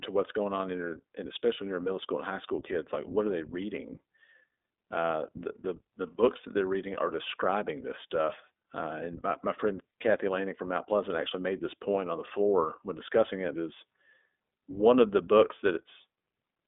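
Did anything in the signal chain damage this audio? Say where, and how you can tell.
Yes, at the codec stage: the speech went through the iLBC codec throughout, consistent with its 15.2 kbps, 20 ms frame mode. Nothing reaches above 3.8 kHz, the band spans 250 Hz to 3.6 kHz, and independently coded frames leave plainly audible roughness.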